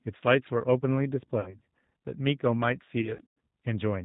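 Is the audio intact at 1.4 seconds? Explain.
No. VoIP packet loss concealed by the speech codec occurs from 1.40 to 1.55 s: about 60 ms of audio, consistent with two lost packets, was rebuilt by extrapolating the last pitch and filter. It sounds like a fading buzzy smear, weak for a moment after recovery. The G.729 codec, at 8 kbit/s, also audibly roughens the sound there, with nothing above 4 kHz.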